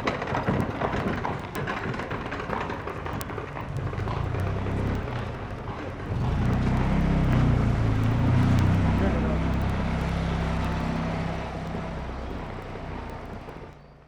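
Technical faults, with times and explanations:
0.13–14.05 s, word clock ticks: a steady train of ticks, about one every 70 ms and roughly two hundred in all, from a receiver whose clock is not locked to the sender's. The two clocks differ by a few hundred parts per million, and each slip drops or repeats one sample.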